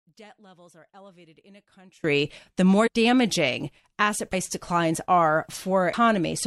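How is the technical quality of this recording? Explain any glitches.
There are two kinds of problems here. For the first 2.04 seconds the speech sits about 28 dB down and sounds faint. That's likely one channel inverted, so the centred voice cancels when the channels are summed to mono.

There are also three spots where compressed frames were skipped, at 2.86–2.88 s, 4.32 s and 5.92 s. The speech jumps ahead by roughly 100 ms, about four 23.2 ms frames, at the first two spots, and by around 300 ms at the third.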